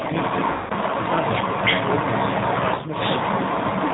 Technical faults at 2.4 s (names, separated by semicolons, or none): G.729 codec; echo leak